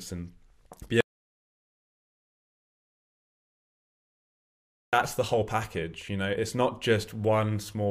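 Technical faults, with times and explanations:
1.01 to 4.93 s, audio dropout to silence: speech cuts out for 3.9 s into silence with no room tone, likely lost input (disconnect, failed link or mute) while recording continued.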